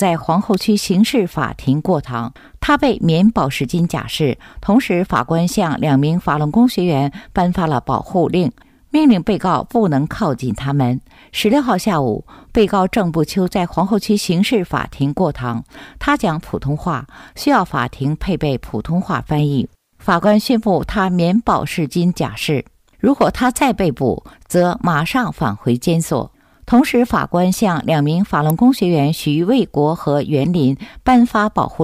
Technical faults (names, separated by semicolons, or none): electrical switching spike